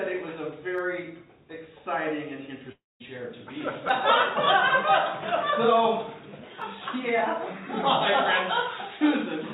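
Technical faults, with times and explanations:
0.78, 3.89 and 6.62 s, dropped samples: three isolated sharp clicks, each a thin vertical line in the spectrum. The likely cause is a handful of samples going missing, so the waveform jumps straight to a later value. Far too brief to lose any sound.
2.72–3.03 s, long network dropout: about 0.28 s of audio never arrives, most likely lost in transit. The receiver stretches the last sound into a fading buzz, then about 0.2 s goes nearly silent before the audio picks up again further on, inside the call's 4 kHz band limit.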